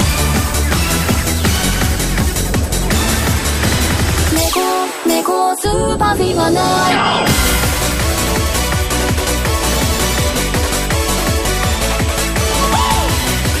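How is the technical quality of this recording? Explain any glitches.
Technical quality is compromised by a constant high-pitched tone running from start to finish. USB whine sits at 8 kHz throughout, about 20 dB below the audio. The bus's 125-microsecond microframe current leaks in through the power or ground, so a spectrogram shows a thin, unbroken horizontal line there.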